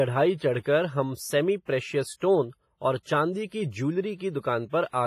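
Throughout, the speech rings and smears with signal-following hiss, likely from heavy WMA compression at a low bitrate; spectrograms show blurred, patchy energy and nothing above 15.4 kHz.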